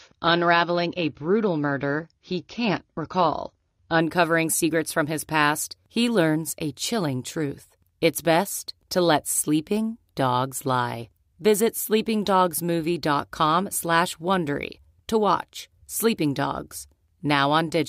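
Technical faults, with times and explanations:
0.0 to 4.0 s, adaptive stream starting at a low bitrate: dull speech with nothing above 7 kHz and strong codec artefacts, then a sudden gapless lift, fitting a step from about 24 to 96 kbit/s AAC.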